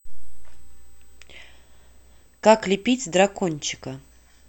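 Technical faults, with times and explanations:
Throughout, USB whine: faint fixed whine at 8 kHz, strongest at 16 kHz, roughly 40 dB below speech, as USB microframe current leaks through power or ground.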